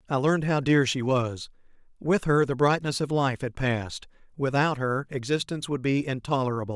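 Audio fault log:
No audible faults found.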